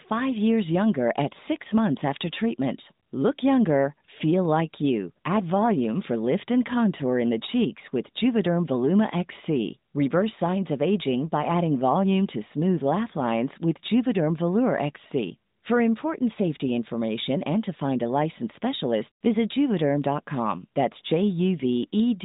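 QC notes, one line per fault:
No faults found; the speech carries the expected band-limited character of the AMR narrowband mobile codec path.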